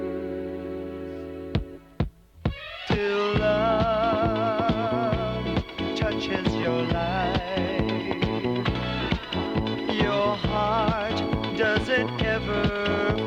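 Nothing here calls for attention, as the sound comes through steady and whole, with no dropouts, glitches or anything else to flag.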